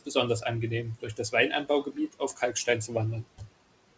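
Noise suppressor artifacts run through the whole clip. The suppressor treats the room noise as steady and pulls it down by about 18 dB, frame by frame. That noise sits about 20 dB below the speech to begin with. So the background drops away in the gaps and comes back up under the speech. Nothing is heard above 8 kHz, which fits a wideband call codec such as G.722.

Between 1.84 and 2.68 s, the noise suppressor cuts into the speech. Here it mistakes quiet parts of the speech for noise and turns them down with the background. The deepest drop is about 12 dB. Only part of that stretch is hit, adding up to about a fifth of a second. The parts that are turned down sound swallowed or faint.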